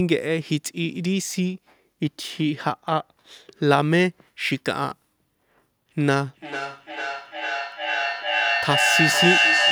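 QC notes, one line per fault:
6.01–9.72 s, feedback echo between two devices: from 6.01 s to the end, the speech returns at a steady interval of roughly 0.4 s, each repeat thinner and more ringing than the sound it copies. A second device in the same room is replaying this microphone's signal, and the microphone captures it again. The echo canceller removes only its own device's playback, so nothing breaks the loop. The repeats climb to about 1 dB above the speech and pile up rather than decay.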